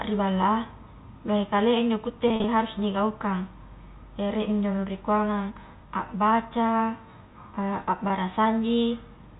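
From 2.28 to 2.44 s there is packet loss with pitch repetition: about 80 ms of audio is missing in short gaps spread over 160 ms, none longer than 40 ms. The decoder fills each gap by repeating the last pitch period, so the speech briefly sounds held and buzzy just before "harus nigaukang". A single 20 ms gap at 8.08 s produces a brief buzz. The band stays within the 4 kHz telephone limit of G.711.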